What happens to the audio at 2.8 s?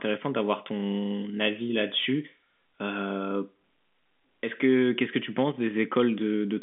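Nothing goes wrong at 2.8 s: the speech carries on intact there, with the narrow telephone band of G.711 coding that runs through the whole clip.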